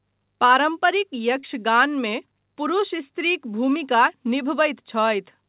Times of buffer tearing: none

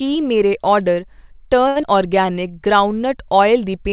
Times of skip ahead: 1.82-1.85

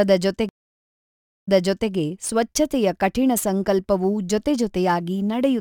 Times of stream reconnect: 0.49-1.92

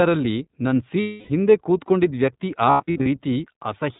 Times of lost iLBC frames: 1.00-1.31, 2.70-3.08

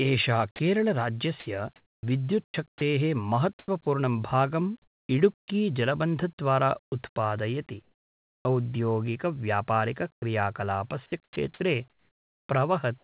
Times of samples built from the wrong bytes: none

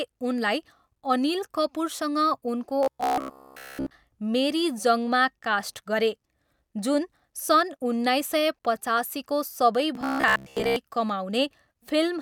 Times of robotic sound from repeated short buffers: 2.83-3.91, 9.95-10.76

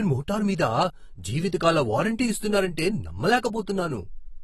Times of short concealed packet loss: none

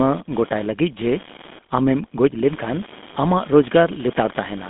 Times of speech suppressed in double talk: none

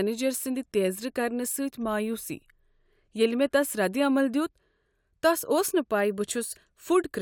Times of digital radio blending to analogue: none

